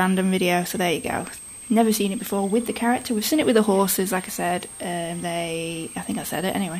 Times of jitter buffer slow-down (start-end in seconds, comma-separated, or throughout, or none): none